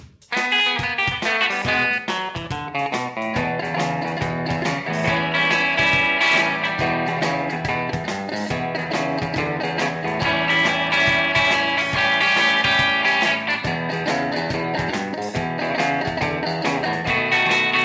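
No technical faults can be heard anywhere in the audio. It has come through a call path whose content stops at 8 kHz, which fits a wideband codec such as G.722, and that top-end limit is the expected result of the path working as designed.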